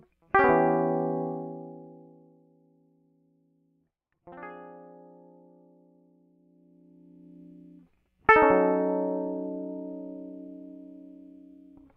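Nothing goes wrong in this bit of music, and there's no technical fault to point to anywhere in it.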